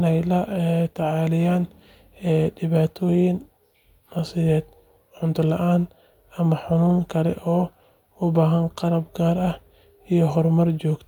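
No dropouts, clicks, distortion or other playback faults can be heard anywhere in the speech.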